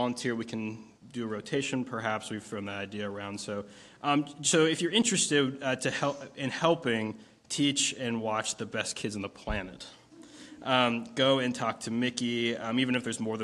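No technical faults can be heard anywhere in the recording.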